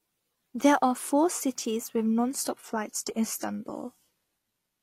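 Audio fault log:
2.28–4.82 s, adaptive stream at a lower bitrate: the player switched abruptly to a leaner encoding, consistent with HE-AAC near 20 kbit/s, so the treble drops without any gap. A spectrogram shows a hard ceiling at 14.9 kHz, while the waveform stays continuous.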